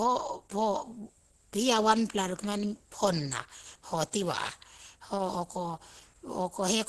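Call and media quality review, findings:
Muffled, hoarse, grainy speech throughout. Nothing above 12.1 kHz. Spectrogram shows a hard ceiling with smeared, noisy band texture below it, not clean harmonics. Likely Opus compression in hybrid speech mode, with heavy codec damage, consistent with a very low bitrate around 12 kbps.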